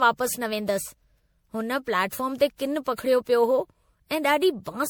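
Generation loss runs throughout the speech. It sounds swirly, smeared and hollow, with blurred attacks and nothing above 20.7 kHz. The sound points to repeated MP3 coding, likely about seven passes at 96 kbit/s. Each pass requantises on a shifted frame grid, so noise and spectral holes accumulate.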